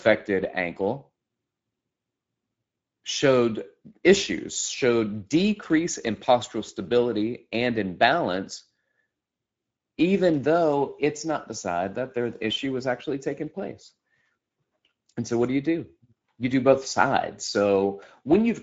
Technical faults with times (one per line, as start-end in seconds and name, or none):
0.00-18.62 Speex codec